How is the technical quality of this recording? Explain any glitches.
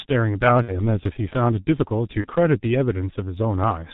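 The technical quality is poor: the speech passes through a heavily compressed low-bitrate telephony codec throughout, and two short dropouts are patched over by the decoder.

The G.723.1 codec shapes the whole clip. It models the voice in 30 ms frames with a slowly updated filter, so the speech is muffled and hoarse, with smeared consonants and heavy coding damage. The strength of the damage fits a bitrate around 6 kbit/s. On a spectrogram, energy stops abruptly near 4 kHz, and harmonics look blocky and smeared in time rather than crisp.

VoIP packet loss concealed by the speech codec occurs at 0.63 to 0.79 s and again at 2.22 to 2.28 s. About 60 ms of audio goes missing in the first event, which suggests two frames, and about 30 ms in the second, suggesting one. The decoder fills each gap by repeating its last pitch and filter at falling gain, which produces a buzzy tone or coloured noise that fades. 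Because each frame builds on the one before, the sound stays weak or distorted after the packets resume. On a waveform, this appears as a steadily shrinking pattern. A spectrogram shows a frozen spectrum instead of the normal movement of speech.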